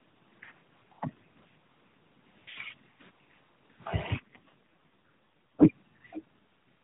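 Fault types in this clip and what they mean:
AMR rate drop: a weakened mobile link pushed the AMR narrowband codec down to a far lower speech rate, spending bits on error protection. From 4.18 to 5.66 s the voice grows rougher and more synthetic with no gap, which fits a 12.2 to 4.75 kbps step.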